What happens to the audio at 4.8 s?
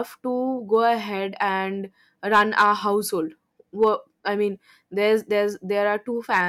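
At 4.8 s the speech carries on cleanly, with no dropout, click, distortion or other fault at that point.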